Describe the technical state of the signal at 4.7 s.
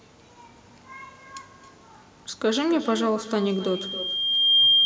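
At 4.7 s a loudspeaker feedback squeal is under way. The microphone is picking up the loudspeaker it feeds, and at 3.2 kHz the loop gain exceeds one. From 3.39 s to the end at 4.85 s that tone grows over roughly a second into a squeal, by now roughly 10 dB above the speech.

Underneath, there is echo with no canceller. The far end's loudspeaker output returns through its microphone and nothing removes it, so the speech is trailed about 0.3 s later by a thinner copy about 16 dB quieter.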